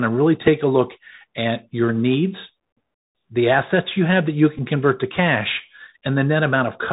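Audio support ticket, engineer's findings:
Bluetooth CVSD headset codec, whole clip. Link running the narrowband headset codec, sound consistent with 64 kbps CVSD: one-bit up/down coding with adaptive step. Result: speech band-limited to 4 kHz, no air above it. Step size lags on loud, bright passages, causing slope-overload distortion. Sibilants scratchy. Granular hiss under the speech throughout. Damage plainly audible.

Bluetooth headset packet repeated, 0.47 s and 4.58 s. Lost voice packets on the headset link, with the chip re-decoding the previous packet's bits. At 0.47 s, about 3.8 ms, consistent with one lost packet: small tick only. At 4.58 s, about 11.2 ms, fits roughly three consecutive losses: repeats at a 3.75 ms period give a brief buzz near 267 Hz until good packets resume.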